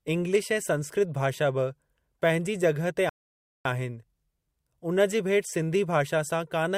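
At 3.09 s, just after "बि पंहिंजे जॻहि ते", the speech stops dead. This is a rebuffering stall. The player used up the audio it had downloaded and had to wait for more. Silence fills the gap until 3.65 s, about 0.56 s in all. Then the speech picks up at exactly the point where it broke off. Nothing is skipped or repeated. The stall only adds time, leaving an unnatural pause in the speech.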